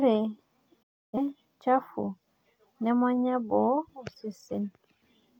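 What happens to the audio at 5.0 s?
At 5.0 s the speech carries on intact, with no dropout, click, distortion or other fault.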